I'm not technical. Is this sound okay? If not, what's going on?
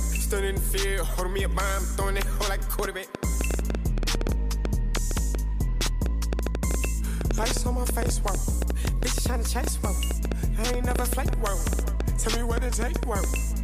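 No. From 2.79 s to the end there is a train of clicks: a ticking about 6.7 times a second at an uneven pace, heard in the pauses too, which sets it apart from crackle in the recording itself. It is likely interference or a faulty connection or power supply.

There are also three drift correction steps, each a sudden jump in speed and pitch of about a semitone that holds steady and then snaps back, unlike a slow wobble. From 3.91 to 5.60 s the sound runs 6.3% slower and lower, from 8.51 to 10.15 s 6.3% faster and higher, and from 12.25 to 13.03 s slower and lower again. This is likely software nudging the playback rate to keep two clocks in step.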